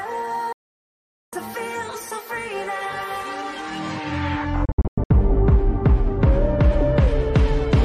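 At 0.52 s the sound snaps to silence in a digital broadcast dropout and stays gone until 1.33 s, about 0.8 s, with only a 3 ms fade at the edge. The receiver lost good frames and muted until clean ones arrived, so that stretch of the programme simply isn't there. From 4.65 to 5.11 s it happens again but choppier: short holes totalling about 290 ms, the longest 96 ms, which sounds like scattered failed frames.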